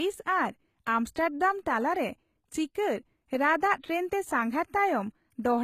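A speech clip carrying plainly audible HE-AAC compression damage throughout: the treble sounds bright but synthetic, with nothing above 14.9 kHz. It is likely spectral band replication at a low bitrate, around 20 kbps, copying lower bands upward, unlike a plain low-pass, which would sound dull.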